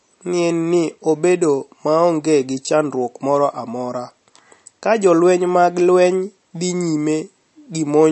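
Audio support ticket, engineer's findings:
Watery, swirling speech for the whole clip, nothing above 8.1 kHz; likely MP3 compression at a starved bitrate, fitting 42 kbps. Weak frequency lines flicker frame to frame. Unlike a plain low-pass, the top isn't just dull but warbles.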